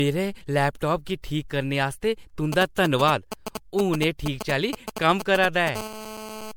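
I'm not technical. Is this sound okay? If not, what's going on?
No. The whole recording sounds swirly, hollow and smeared, with blurred consonant starts. That is likely generation loss, from being compressed and re-saved as MP3 several times over.

From 2.53 to 5.69 s, just after "करने आस्तै", GSM signalling bursts from a nearby mobile phone cut in as a galloping dit-dit-dit of short buzzes, coming in groups.

From 5.76 to 6.52 s, GSM phone buzz takes over. It is a continuous, raspy hum that stays on rather than stuttering, because the phone is now in a call.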